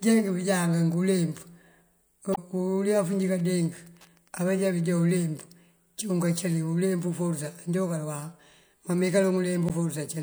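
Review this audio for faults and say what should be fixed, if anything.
Damaged data in a compressed stream at 2.32–2.38 s and 9.66–9.70 s: corrupt frames make the decoder lose sync, giving brief glitches where it jumps ahead to the next frame it can read. Verify stream integrity with checksums and retransmit corrupt segments.

Wi-Fi interference from 2.87 to 5.20 s: the circuit rectifies a nearby radio's beacon, producing faint ticking well below the speech every 102.4 ms, seen as evenly spaced vertical lines. Move the Wi-Fi radio away from the audio path and shield or filter the input.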